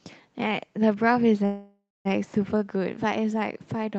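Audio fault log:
1.45–2.07 s: call audio freeze. The speech stalls into a fading buzz, then about 0.23 s of silence, likely from delayed packets emptying the jitter buffer. It resumes 0.6 s late, nothing lost. Spectrogram: smeared bands fading to a blank gap; waveform: shrinking envelope, then flatline.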